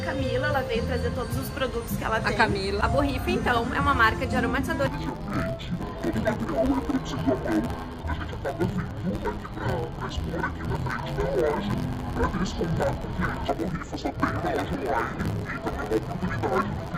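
From 4.87 s to the end, the sound turns dull and robotic, with a buzz at about 93.8 Hz and no clear octave drop. This is interleaved audio read as planar: each 10.67 ms block, which fits 512 samples, has its alternating left-right samples split into halves.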